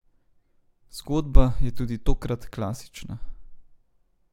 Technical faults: none

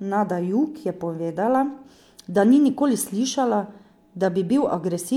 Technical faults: none

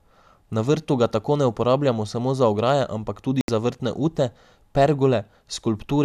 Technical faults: digital broadcast dropout

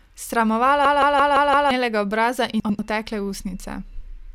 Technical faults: system hang loop; frames out of order

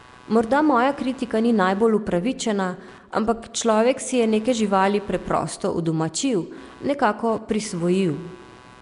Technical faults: computer activity noise; Nellymoser compression

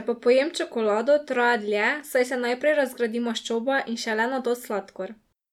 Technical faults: none

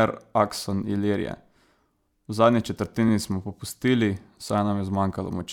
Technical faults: repeated frames

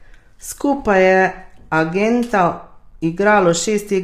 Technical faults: low-delay AAC compression

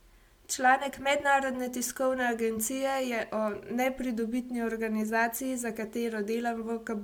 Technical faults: generation loss

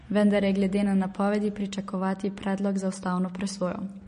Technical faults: MP3 compression

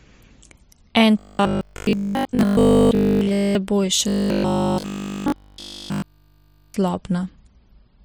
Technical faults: robotic sound from repeated short buffers

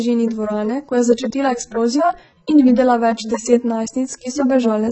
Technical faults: AAC compression

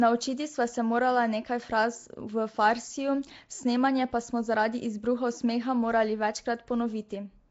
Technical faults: Nellymoser compression

